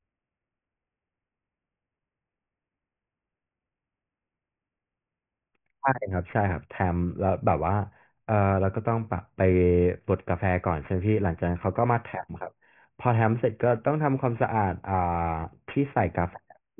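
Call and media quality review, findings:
Aliasing, throughout the speech. Sibilants and fricatives sound gritty, with tones that do not belong, and the spectrum runs hard up to a band edge near 3 kHz. Probable component is a resampling stage that skipped its anti-alias filter. The fold point fits a drop from 48 kHz to a 6 kHz rate. Content above 3 kHz mirrors back below it, about 25 dB under the signal.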